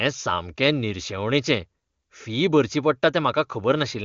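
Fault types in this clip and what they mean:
No faults can be heard.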